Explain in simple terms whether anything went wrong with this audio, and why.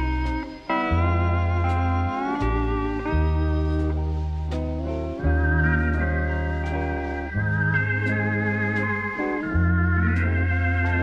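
Nothing went wrong with this audio, and no faults can be heard anywhere in it. The sound carries on with nothing interrupting it at any moment.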